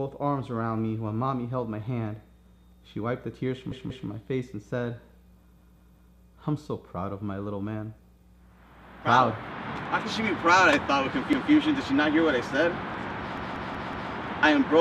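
Repeated buffer at 3.72, 5.57, 11.33 and 13.38 s. New audio arrived late, so the same 186 ms piece, which fits an 8192-sample buffer, replays two, three, one and four extra times. Each is a hard-joined stutter, and no audio is skipped.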